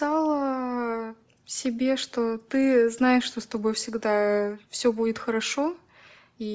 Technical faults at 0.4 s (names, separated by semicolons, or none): Bluetooth LC3 compression